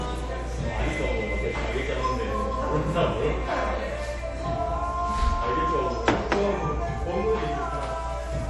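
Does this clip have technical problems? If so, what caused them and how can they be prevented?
Yes. Throughout the audio nothing is present above 11.4 kHz, and the remaining high end has a plainly audible watery, swirling texture. The likely cause is MP3 compression at a low bitrate, which fits about 48 kbps. With so few bits available, the encoder removes everything above a fixed cut-off and drops quiet frequency components. Those components appear and disappear from one frame to the next, which produces the unstable, swishy character. To prevent it, keep the audio in a lossless format or encode it at a higher MP3 bitrate.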